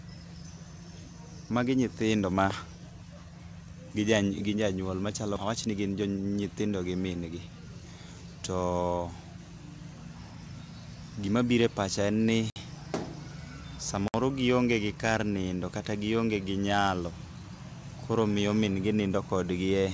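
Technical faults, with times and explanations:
5.36–5.38 s, skip ahead: right after "janyuol machalo", about 0.7 s of audio was dropped while later audio waited, so playback jumps forward almost seamlessly.
5.55–6.30 s, jitter buffer speed-up: with too much audio queued, the receiver trimmed short pitch-period pieces, about a tenth of a second in total, so the sound runs 11% faster at the same pitch and feels hurried.
12.50–12.56 s and 14.08–14.14 s, block of digital silence: the first comes right after "pacha en ni". Each 60 ms block of samples was zeroed with no fade, so the sound cuts out and back abruptly around a short, dead hole in the G.722 call audio.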